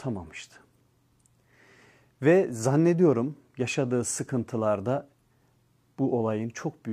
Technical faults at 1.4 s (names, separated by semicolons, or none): none